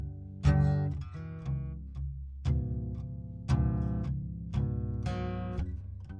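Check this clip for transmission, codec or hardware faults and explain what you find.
The music runs slow and low for its whole length, a wrong sample rate fault. The samples are clocked out more slowly than they were captured, with no rate conversion, so speed and pitch drop together by the same ratio: playback runs at 0.689 times normal speed and everything sits about 6.45 semitones flat, just over a tritone. That ratio fits 32 kHz material being played back at 22 kHz. The result sounds sluggish, dark and heavy throughout.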